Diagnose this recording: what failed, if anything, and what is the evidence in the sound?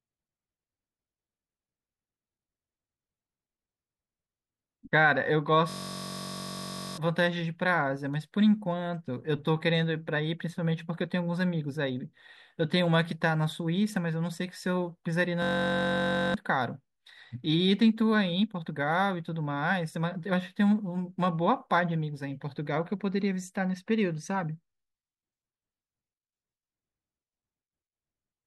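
System hang loop at 5.70–6.98 s and again at 15.42–16.34 s, a driver or buffer-stage failure. In both spans the speech gives way to a steady buzz at about 46.9 Hz, made by one 21.33 ms fragment repeating exactly, which fits a 1024-sample ring buffer. The host stalled while the interface kept replaying its last buffer, 60 times and then 43 times, so roughly one and a half seconds and then about a second of real speech never arrived.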